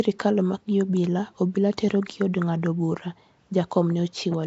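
From start to finish the speech carries a rough, hissy halo and a smeared, underwater quality, plainly audible damage that likely comes from Nellymoser compression at a rate that fits about 32 kbps. Weak bands lose their bits and are replaced with noise. A spectrogram shows grainy, blocky fill and nothing above 7.7 kHz.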